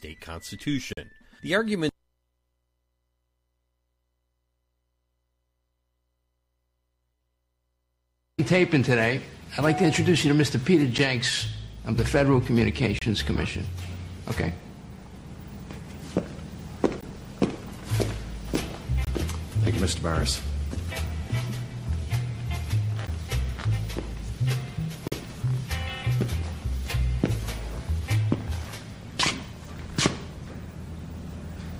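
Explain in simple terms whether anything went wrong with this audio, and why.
The sound drops out briefly eight times, each a sudden hole of silence with sharp edges: at 0.93–0.98, 10.98, 12.99–13.02, 17.01, 19.05–19.07, 21.07, 23.07 and 25.08–25.12 seconds. They last from about 5 to 43 milliseconds and mostly fall about two seconds apart. This is a gap between stream segments. The audio arrives in two-second pieces, and where the timing of two pieces doesn't line up, the player fills the space with silence. No audio is lost.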